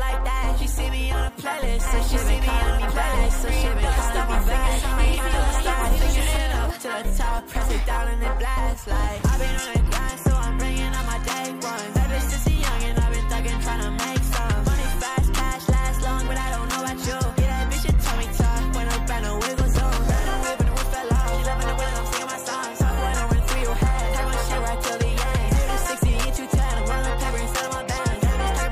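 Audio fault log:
1.87–6.37 s, doubled audio track: the sound is heard twice at once, a second full-band copy trailing about one and a half seconds behind at roughly the same loudness, dry and with abrupt edges, likely from a slower second capture path mixing in.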